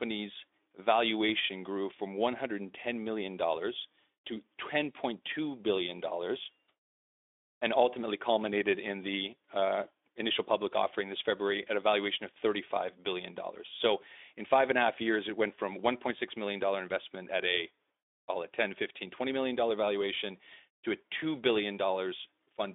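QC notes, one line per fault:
No faults are heard in the speech. The Speex path shows as a line band from 250 Hz to 3.6 kHz with light coding roughness, which fits a bitrate of about 15 kbps.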